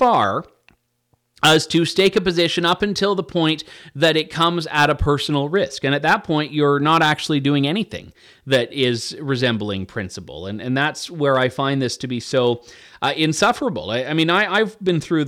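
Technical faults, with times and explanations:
Throughout, hard clipping: the speech is driven about 9 dB past what the signal path can carry, so its loudest peaks are sliced flat at the ceiling. Under one percent of samples are cut, so the damage lands on the loudest peaks as brief crackle and a gritty edge rather than constant fuzz. The squared-off tops add high harmonics abruptly, which separates it from the gentler, rounded thickening of soft saturation.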